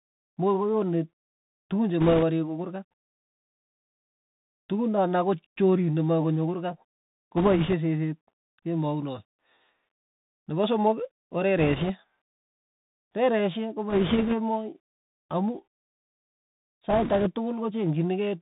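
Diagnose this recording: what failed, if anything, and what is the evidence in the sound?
Codec stage: the Bluetooth CVSD headset codec runs throughout. The spectrogram shows nothing above 4 kHz and a granular hiss floor, and s sounds are scratchy from step-size overload, which fits a 64 kbps one-bit stream.

Radio link: bit errors on a Bluetooth voice link at 2.01–2.24, 7.37–7.74, 11.58–11.91, 13.90–14.35 and 16.89–17.31 s, with a few percent of bits flipped. They sound as rushing crackle and show as broadband noise patches, with no sharp waveform spikes.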